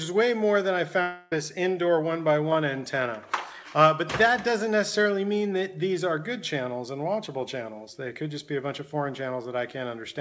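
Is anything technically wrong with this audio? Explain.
Yes. From 1.02 to 1.34 s the sound turns into a smeared buzzy continuation of what came just before, fading rather than dropping to silence, and when normal audio resumes about 0.3 s of material is simply gone. This is likely a long network dropout: packets stopped arriving, and the receiver filled nearly the whole gap with concealment that stretched the last received sound. The missing stretch was never recovered. The audio also cuts off above 8 kHz, which fits the G.722 codec on the call path.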